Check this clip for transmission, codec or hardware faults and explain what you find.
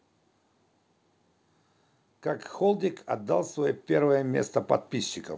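One fault is audible, an automatic gain rising. From 2.23 s to 4.58 s the automatic gain control judges the incoming speech too quiet and steadily increases its gain, by about 8 dB in total. Because the gain acts on the whole signal, the voice and the background noise swell together over those two-plus seconds, giving a gradual lift in loudness and noise floor. The call path's bandwidth, with nothing above 8 kHz, fits a G.722 codec.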